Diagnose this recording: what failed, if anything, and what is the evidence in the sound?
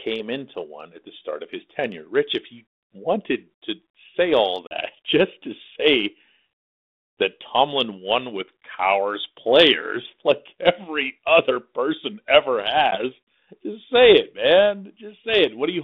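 Hard-edged silent gaps at 4.67 to 4.74 s, after "to say all", and at 12.91 to 12.97 s, after "every other person ever", then the sound returns slightly distorted. This is network packet loss on an ADPCM call. About 40 ms and then 10 ms were dropped, and each time the G.726 decoder's predictor and step size fell out of step until it resynced.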